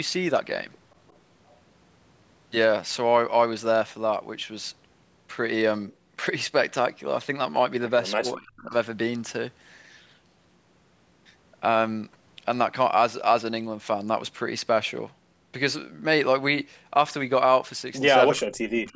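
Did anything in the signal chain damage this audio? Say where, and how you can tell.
Yes. Speech suppressed in double talk at 8.19–8.74 s and from 18.35 s to the end: in call processing, the speech drops by about 35–40 dB, likely because the echo canceller ducked overlapping talk.

Echo leak at 18.87–18.94 s: a faint copy trails 348 ms behind, about 35 dB down, likely loudspeaker pickup that the far end's canceller failed to remove.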